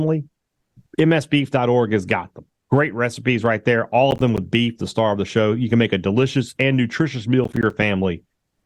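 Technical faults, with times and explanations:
4.11–4.38 s and 7.44–7.83 s: processor overload crackle, after "recipes right there all" and after "delicious and nutritious meal". The processor missed several buffer deadlines in a row. Each miss left a hard-edged silent gap, fitting buffers of around 10 ms. The speech tears into gritty crackle.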